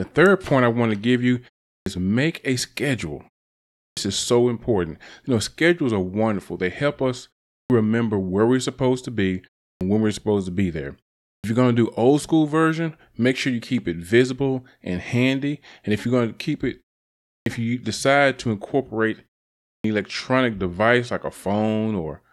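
An output device that sleeps during short pauses of 0.3 to 0.65 s and wakes late clips the start after each pause in this speech, swallowing about 90 to 110 ms at 1.77, 3.86, 7.6 (between "help us" and "remember where we're supposed"), 9.7, 11.33, 17.36 and 19.75 s (after "you decide to incorporate").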